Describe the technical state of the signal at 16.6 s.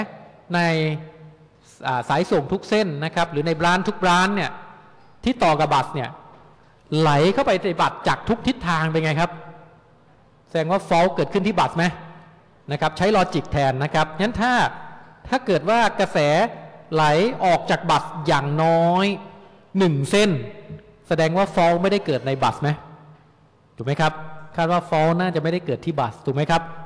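At 16.6 s the signal is intact, with no audible fault at that moment.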